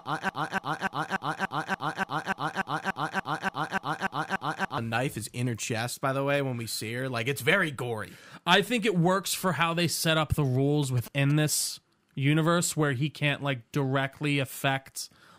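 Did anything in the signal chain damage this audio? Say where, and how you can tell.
Yes. From the very start to 4.78 s, a broken-record loop repeats one 0.29 s fragment back to back fifteen times, likely from a stalled playback or stream buffer resending its last block. A spectrogram shows identical tiles every 0.29 s, and the audio meant for that span is lost.

At 10.83 to 11.32 s, GSM signalling bursts from a nearby phone are rectified in the analogue wiring as a galloping tick-buzz about 15 dB below the speech. The waveform shows regular spikes at 217 Hz, and the spectrogram shows a comb of 217 Hz harmonics.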